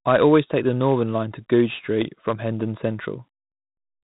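Throughout the speech, 4-bit ADPCM compression adds a gritty hiss to every loud syllable and roughens sharp onsets where the adaptive step lags. Nothing reaches above 3.8 kHz, which fits 32 kbps. Unlike steady background noise, this grit rises and falls with level.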